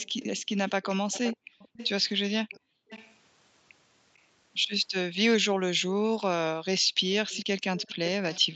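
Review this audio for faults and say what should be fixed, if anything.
An echo canceller on a loudspeaker-playing side likely left part of what its microphone picked up uncancelled, and that residue came back as echo leak. A copy of the speech trails the original by about 0.45 s, from 0.00 to 1.89 s and from 7.29 to 8.55 s at about 15 dB below the speech, from 2.51 to 3.15 s at about 20 dB down, and as a faint scrap near 4.14 to 4.19 s at about 35 dB down. To prevent it, lower the loudspeaker volume or use a headset so the canceller has less to remove.

Background gated by the echo canceller also appears: while the loudspeaker played, the canceller cut the microphone hard, so the room sound drops by as much as about 40 dB and then returns. The dips fall at 1.37 to 1.59 s and 2.60 to 2.89 s, a fifth and a third of a second respectively, and from 5.93 to 7.08 s, where the background is gone for well over half a second. 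Reducing loudspeaker-to-microphone coupling, as with a headset, would keep the canceller from clamping down like this.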